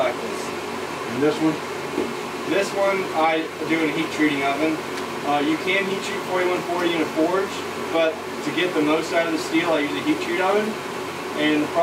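The signal holds steady throughout, with no dropouts, level jumps or timing disturbances anywhere in the recording.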